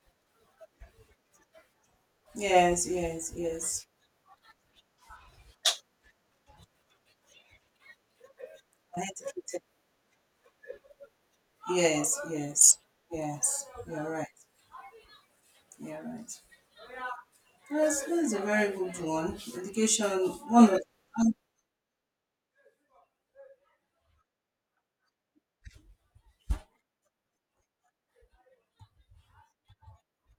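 Speech, with zipper noise from 21.22 to 21.73 s as the level drops by roughly 15 dB. The drop is made in unsmoothed steps, about fifty a second, each leaving a faint click, so a fast ticking rides on it.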